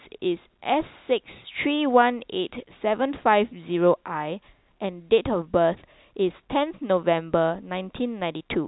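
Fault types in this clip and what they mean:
Nothing's wrong here, just ordinary telephone-band speech coming through as you'd expect.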